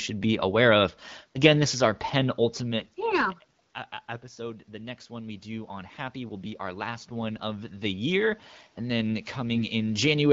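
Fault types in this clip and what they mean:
AMR bit errors: Weakly protected bits in the speech frames arrive flipped. Speech turns briefly hoarse and scratchy for about 0.1 s near 2.8 s and 9.53 s.
Automatic gain rising: After the input drops by about 17 dB, the gain control slowly adds about 11 dB from 4.35 s to 10.03 s. Speech and room noise swell together.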